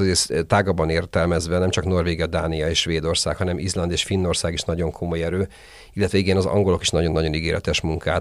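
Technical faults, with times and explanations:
No technical faults can be heard in this speech recording.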